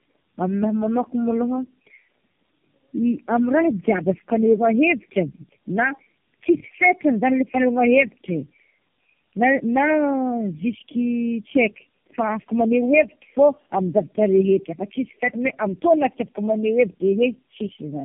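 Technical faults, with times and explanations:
Throughout, tandem speech coding: the speech passed through four low-rate speech codec stages in sequence, each recoding prior damage, leaving rough, muffled, warbly sound with nothing above 3.5 kHz.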